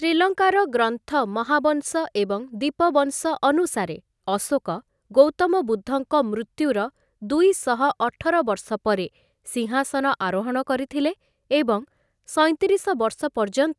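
No technical faults are audible.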